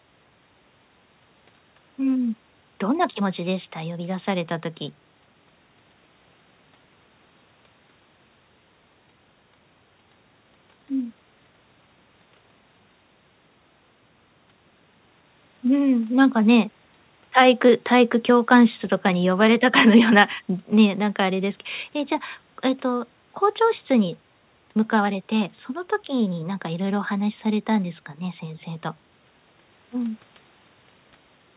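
No faults in the speech; room noise sits about 45 dB below it, and the band stops at 4 kHz, consistent with a narrowband G.711 mu-law call path.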